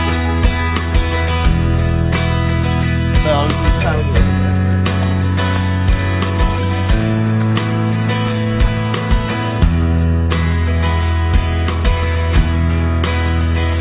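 No dropouts, clicks, distortion or other technical faults can be heard anywhere in the signal.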